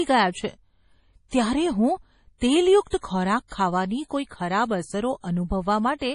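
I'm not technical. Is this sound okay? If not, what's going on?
No, it isn't. MP3 compression damage runs through the whole clip and is heavy, which likely comes from squeezing the speech into a small MP3 file. To save space, the encoder threw away everything above about 10.5 kHz, so the voice sounds dull and muffled. It also dropped quieter details that it judged unimportant, and those details flicker in and out, giving the speech a watery, swirly quality, with harsh chirps on s sounds.

Pre-echo appears at 1.28 to 1.32 s, 2.38 to 2.42 s, and 2.87 to 2.93 s. In each spot a short hiss arrives a few hundredths of a second before a sharp sound begins, and that sound comes out soft and smeared. This happens because the compression handles audio in small chunks and spreads its errors across each chunk. When a sudden loud moment falls late in a chunk, the noise meant to be hidden by it leaks into the quiet just before.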